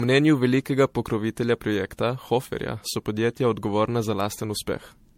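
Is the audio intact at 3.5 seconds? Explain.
No, not really. At 3.5 seconds the speech carries generation loss, as it does through the whole clip. It sounds like it was likely put through MP3 encoding again and again, something like seven passes, at a rate that fits 64 kbit/s. Each pass re-quantises on a shifted frame grid, so the damage stacks up. You get a swirly, hollow, smeared quality, softened consonant attacks, and nothing above 16.5 kHz.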